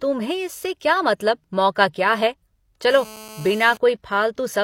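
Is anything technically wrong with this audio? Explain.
Yes, there's GSM phone buzz from 2.90 to 3.77 s. A nearby 2G phone on a call is pulsing at about 217 Hz, and the audio circuitry rectifies those bursts into a steady, raspy, harmonic-rich buzz sitting roughly 20 dB under the speech.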